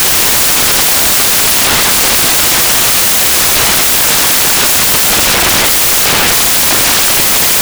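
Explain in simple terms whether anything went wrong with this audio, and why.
The whole clip, from start to finish, is filled with loud, harsh noise: the samples were built from the wrong bytes. The player assembled each number wrongly, so tiny jittery details became huge values.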